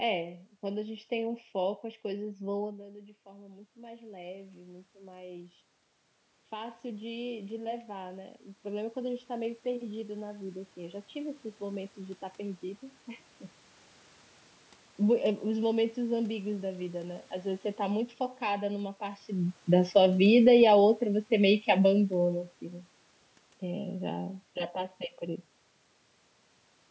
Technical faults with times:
0.00-26.91 channel delay (comb filtering)
19.60-22.48 automatic gain falling

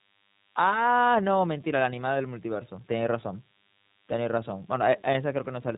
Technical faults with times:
0.00-5.78 DECT cordless phone buzz
0.00-5.78 iLBC codec

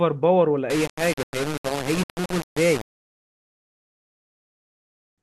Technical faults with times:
0.70-5.18 low bit depth without dither

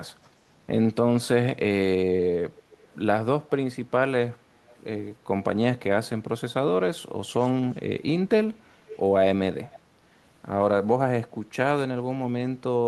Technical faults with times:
2.56-2.96 echo leak
4.71-4.75 echo leak
7.40-7.77 echo leak
8.87-8.99 echo leak
9.71-9.79 echo leak

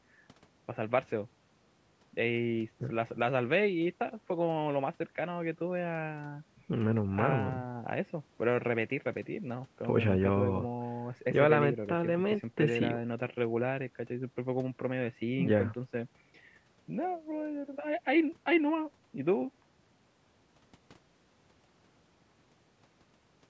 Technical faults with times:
none

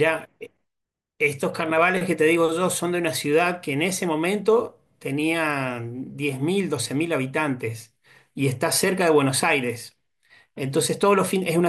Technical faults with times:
none

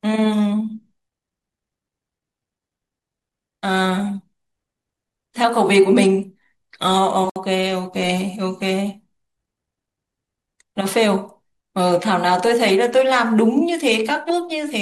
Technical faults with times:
7.30-7.36 gap at a join of encoded pieces

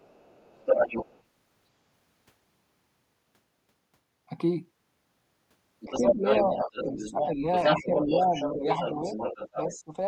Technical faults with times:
0.00-1.22 other side's voice leaking through
5.80-9.76 other side's voice leaking through
5.85-7.44 speech suppressed in double talk
7.76-9.07 speech suppressed in double talk
9.54-9.93 speech suppressed in double talk

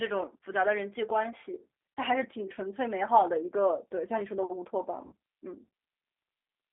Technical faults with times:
0.00-6.73 G.729 codec
1.96-1.99 VoIP packet loss concealed by the speech codec
5.06-5.13 VoIP packet loss concealed by the speech codec

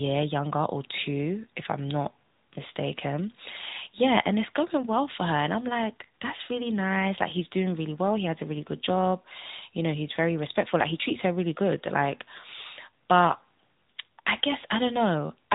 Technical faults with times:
0.00-15.54 AMR narrowband mobile codec

